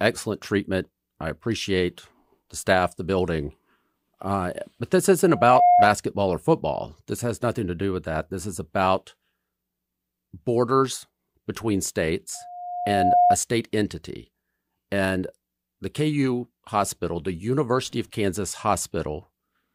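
Speech with two bursts of loudspeaker feedback squeal. The first runs from 5.26 to 5.90 s, after "but this" and before "or football". A single 714 Hz tone swells over roughly 0.4 s to about 10 dB above the speech. The second runs from 12.34 to 13.37 s, between "borders between" and "state entity". The same tone builds more slowly, over about 0.7 s, peaking near 5 dB above. The microphone is hearing its own loudspeaker, and the loop gain tops unity at that frequency.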